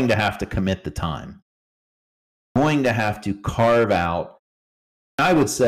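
Hard clipping runs through the whole clip: the speech is driven about 10 dB beyond what the signal path can carry, so a few percent of samples have their peaks sliced flat, and those squared-off tops add high harmonics heard as a harsh, gritty fuzz on every louder syllable.

A clipped start after a pause occurs at 2.22 s, following 0.88 s of silence, and again at 4.85 s, after 0.54 s. Each time the output device has gone idle and takes about 0.34 s to wake, so the speech bursts in abruptly with its opening sounds missing.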